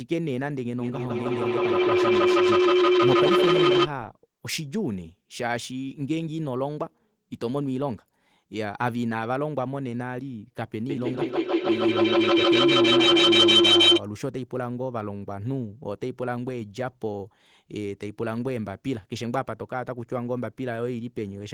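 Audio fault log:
0.80–3.92 s and 10.89–14.05 s, feedback howl: two devices sharing a room and call keep re-amplifying each other, so the sound grows instead of fading, repeating roughly every 150 ms. It settles near 400 Hz the first time and near 3 kHz the second, peaking about 9 dB and about 11 dB over the speech.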